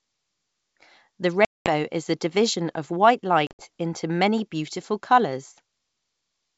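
Packet loss on an ADPCM call cuts hard silent holes at 1.45 to 1.71 s, about 210 ms before "is a division of", and at 3.47 to 3.64 s, where 100 ms drops out in scattered gaps before "into many beautiful". The decoder's predictor loses step with the sender, so each re-entry sounds briefly rough.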